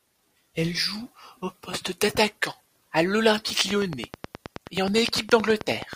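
From 3.71 s to 5.94 s a train of clicks ticks over the speech at a regular 9.4 per second. There are some twenty similar pulses standing well above the signal. They likely come from nearby equipment interference or a faulty connection or power supply.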